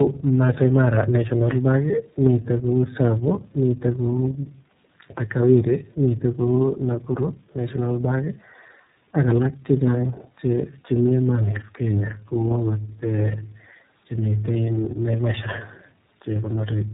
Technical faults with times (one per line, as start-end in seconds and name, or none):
0.00-16.94 tandem speech coding